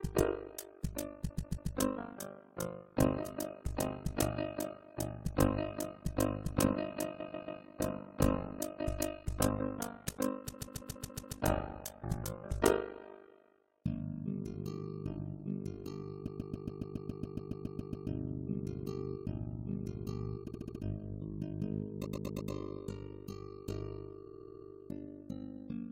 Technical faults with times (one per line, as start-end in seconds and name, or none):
0.00-25.92 overlap-add ripple
1.29-1.71 repeated frames
7.19-7.60 repeated frames
10.53-11.37 repeated frames
16.27-18.08 repeated frames
20.47-20.82 repeated frames
22.05-22.51 repeated frames
24.25-24.67 repeated frames